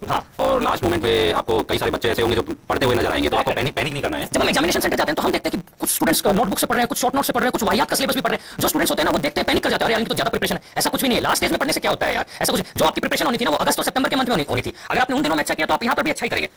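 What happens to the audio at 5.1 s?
At 5.1 s, as throughout the clip, a steady 150 Hz buzz sits on the audio, which runs 1.6 times too fast at roughly normal pitch. This is a block size mismatch (truncated): each longer block, which fits 512 samples, loses its tail when read.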